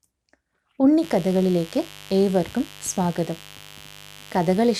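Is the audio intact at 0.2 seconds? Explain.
Yes, the speech at 0.2 s plays through intact, with no dropout, click, distortion or other fault at that moment.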